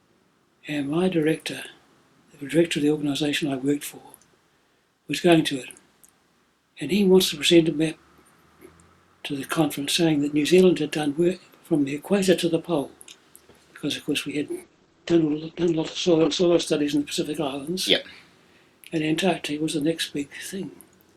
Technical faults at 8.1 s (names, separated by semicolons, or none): none